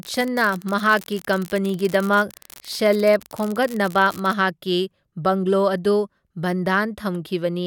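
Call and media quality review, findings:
Unreliable data bit, 0.0 to 4.34 s. Steady crackle and fizz over the speech, still there in the gaps, then gone. Probable component: converter or digital interface with one marginal data line. That bit flips in a random share of samples, each flip a fixed step of about -14 dBFS. Same-size spikes, so an even, level-independent hiss rather than program-related distortion. Worth checking that line's connection or timing.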